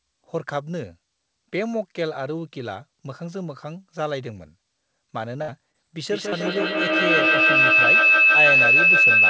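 A speech clip carries three kinds of technical fault, with the audio band ending at 8 kHz as a wideband call path would leave it. First comes a burst of packet loss from 5.42 to 5.50 s. The receiver stretches the last sound for about 60 ms and lets it fade. Then the speech resumes with roughly 60 ms of it gone. Next there are two short concealed packet losses, at 5.72 to 5.76 s and 6.30 to 6.34 s. Each hole is about 20 ms long. The decoder patches it by continuing the preceding sound, so you hear a brief smear or wobble, and a quick consonant can drop out. Between those two, a feedback howl starts at 5.96 s and runs to the end. Two devices in one room are looping microphone to loudspeaker, and each trip comes back louder. The tone narrows to around 3 kHz, pulses about every 150 ms, and peaks about 10 dB above the speech.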